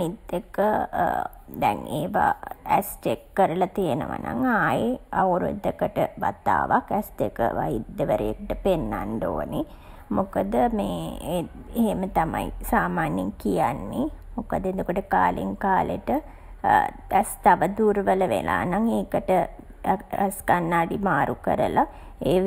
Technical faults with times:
0.00-22.47 channel delay (comb filtering)

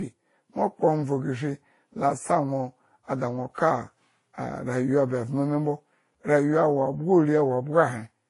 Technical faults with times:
0.00-8.29 transcoding between lossy codecs

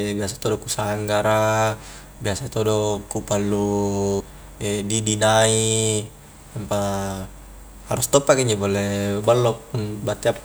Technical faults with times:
4.19 compressed frames skipped

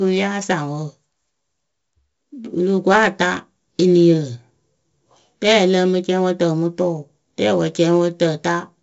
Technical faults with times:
0.00-8.83 4-bit ADPCM compression

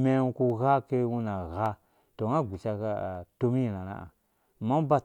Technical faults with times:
0.50 dropped samples
1.66 dropped samples
3.15 dropped samples

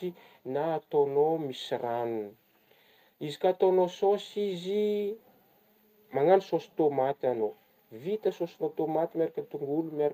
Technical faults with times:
none

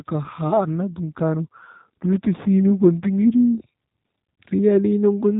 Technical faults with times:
0.00-5.40 G.729 codec

